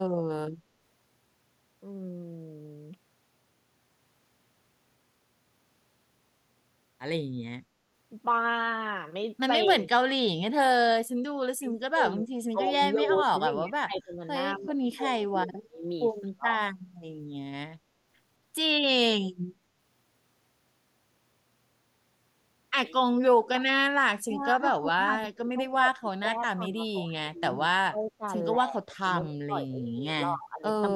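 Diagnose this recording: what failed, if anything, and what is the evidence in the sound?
Call processing: speech suppressed in double talk at 9.66–10.19, 11.55–14.24, 14.56–15.85, 16.22–16.5, 24.16–27.5, 27.67–28.24, 28.59–29.97 and 30.16–30.67 s. The speech ducks by about 20 to 35 dB, likely because the echo canceller mistook it for loudspeaker echo. Unlike packet-loss gaps, these are level dips lasting up to seconds.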